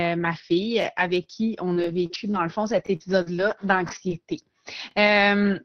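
Scattered short gaps appear between 1.00 and 2.36 s. Roughly four small packet losses occur there, the longest around 40 ms. Together they remove about 100 ms of speech, and the receiver covers each hole by extending the preceding sound, stretching about 180 ms of audio in total. That is a small share of the span, well under a tenth. Each patch comes through as a brief tick, smear or hiccup.

Overlapping chunks show up as short stutters at 1.84, 2.87, 3.89 and 4.91 s, spaced almost exactly 1.0 s apart. The audio was handled in one-second blocks, and each block began about 23 ms before the previous one finished. That 23 ms slice plays twice at every join, producing a regular click or doubled fragment. Three of these joins fall inside the loss regions.

Repeated packet loss with a robotic sound runs from 2.76 to 4.12 s. Four gaps remove 120 ms, the longest 41 ms, and concealment fills about 121 ms by extending earlier sound, about 9% of the span. 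With the surrounding reconstruction, around 200 ms is affected. Because the holes follow one another closely, the speech turns choppy with a robotic edge, and pieces are missing.

Lost packets rebuilt from error correction occur at 5.07 and 5.37 s, each covering 20 ms. In both cases the following packet carried a low-bitrate Opus in-band FEC copy, so there is no gap. Instead, a brief rougher, noisier grain is audible. Since the call audio tops out near 6 kHz, consistent with Opus at 20 kbps, no additional high-frequency dip is heard at these points.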